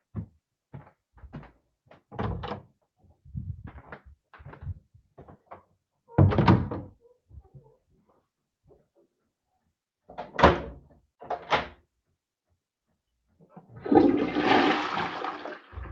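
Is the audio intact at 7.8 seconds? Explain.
No. Between 7.29 and 8.2 s the sound is cut by the noise suppressor, which misreads it as noise and pulls it down by up to about 15 dB for roughly a fifth of a second in total. On a waveform the envelope sags abruptly, and a spectrogram shows the energy fading early.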